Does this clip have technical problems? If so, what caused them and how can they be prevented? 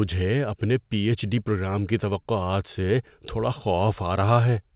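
No, the speech in this clip shows no technical problems. It has come through a call path, and with nothing above 4 kHz its narrowband sound fits G.711 mu-law telephone coding at 64 kbps.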